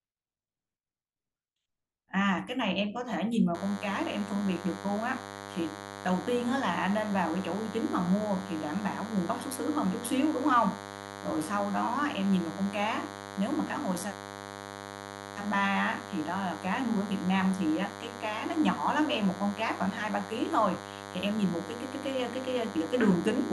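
DECT cordless phone buzz enters at 3.54 s and runs to the end of the speech. A nearby DECT handset or base fires a radio burst every 10 ms, which the audio circuitry rectifies into a thin, steady 100 Hz buzz rich in harmonics, sitting only modestly below the voice.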